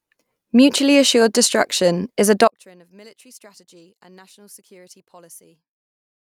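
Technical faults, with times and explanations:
2.48–6.28 s: one channel inverted. The speech suddenly falls by about 29 dB and stays faint to the end. This is likely one stereo channel with reversed polarity, so the centred voice shared by both channels cancels when they are summed to mono.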